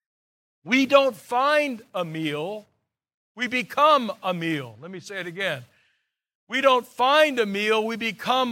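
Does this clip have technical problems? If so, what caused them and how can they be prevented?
No, there are no technical problems in this recording.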